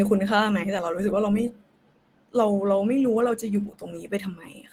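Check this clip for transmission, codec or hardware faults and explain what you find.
One codec fault runs through the whole clip. From start to finish the speech sounds hoarse and muffled, with a grainy, noise-filled top end. That points to low-rate Opus compression, likely around 16 kbps in its hybrid mode, where a speech coder handles the lower band and band-energy coding fills the upper one. Unlike MP3, there is less swirling and fewer watery holes, mostly roughness.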